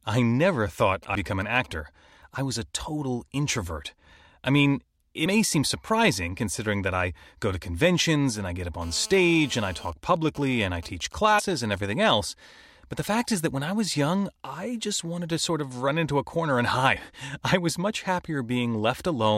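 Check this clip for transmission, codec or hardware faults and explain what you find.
Three kinds of fault turn up in this speech recording: interference from a nearby 2G phone, heard both as intermittent bursts and as a steady buzz, plus four points where compressed frames are skipped.

GSM signalling bursts, 0.80–1.66 s and 9.90–11.90 s: a galloping dit-dit-dit of short 217 Hz buzzes in the first stretch, and even ticks with a longer buzz twice a second in the second, roughly 20 dB below the speech. A nearby phone sends only brief groups of radio bursts while signalling, or while its user is silent in a call, and the audio circuitry rectifies them.

Compressed frames skipped, at 1.14 s, 5.25 s (after "total introvert I mean", before "seem surprising considering that"), 11.38–11.40 s, and 16.95 s (after "into a corner and"): the audio jumps forward. About 100, 70, 70 and 150 ms of sound go missing, consistent with whole 23.2 ms frames being dropped or rejected by the decoder.

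GSM phone buzz, 8.82–9.90 s, starting after "and I get up": a hard, raspy 217 Hz buzz full of harmonics, about 22 dB below the speech and unrelated to it. An active call makes the phone transmit 217 bursts a second, which the circuitry demodulates into this steady tone.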